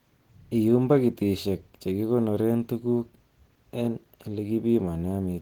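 Opus compression runs through the whole of this speech clip, likely from a low-rate encode in the codec's hybrid speech mode, which fits a bitrate around 16 kbps. Audio still reaches about 20.2 kHz, but the starved bands leave it plainly muffled and hoarse.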